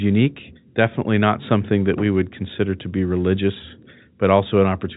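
No technical faults occur in this speech, which is carried through G.711 A-law telephone coding with nothing above about 3.8 kHz.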